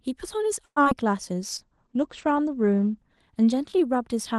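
At 0.65 to 0.78 s the sound stretches into a fading buzz, then about 40 ms of silence. This call audio freeze is likely a stalled jitter buffer. It resumes intact, with 110 ms of delay added, unlike a loss. At 0.84 to 0.87 s a brief short concealed packet loss smears the sound. Here 20 ms never arrived and was patched over, so content is missing rather than delayed. From 1.43 s to the end, a call bitrate drop takes Opus from 32 to 12 kbps, bottoming out for about 1.06 s. The top end narrows from 12 kHz to 8 kHz, leaving a lasting muffled roughness rather than a momentary glitch.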